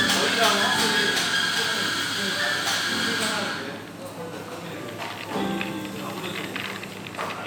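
Nothing stood out as a technical fault on listening to this recording of sounds.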